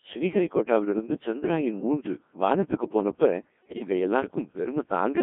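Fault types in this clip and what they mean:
Codec 2 vocoder: The speech is rebuilt from pitch, voicing, energy and spectral-envelope parameters and resynthesised from sine waves, so it sounds heavily robotic and buzzy within a 200 Hz to 3.5 kHz band. That points to roughly 1.6 kbit/s. Unlike ordinary compression, the original waveform is gone throughout, not just smeared.
Bit errors on digital voice radio: From 3.62 to 3.87 s the synthetic voice suddenly lurches in pitch, level and tone colour, breaking into warbling robotic gibberish. Corrupted parameters at an error rate of around 7 percent cause this. Packet loss would leave silence or repeats, not this.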